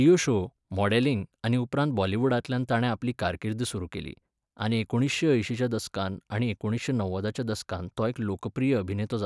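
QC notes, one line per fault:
Nothing stood out on listening to this speech recording.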